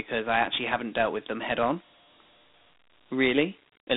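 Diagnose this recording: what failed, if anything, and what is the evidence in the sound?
Dialogic VOX ADPCM throughout, at the codec: speech confined to 200 Hz to 3.7 kHz, with gritty hiss tracking it from coarse 4-bit steps at 32 kbps.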